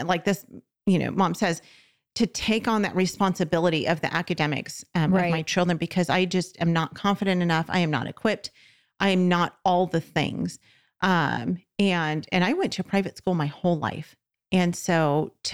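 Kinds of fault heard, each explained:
No technical faults can be heard anywhere in this speech recording. There is nothing to list under any heading.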